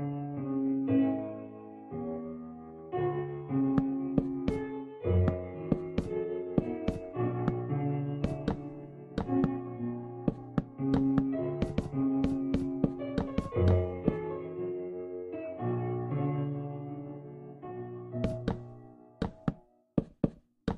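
Nothing technically wrong turns up anywhere in this one, so there are no problem spots or causes to point to.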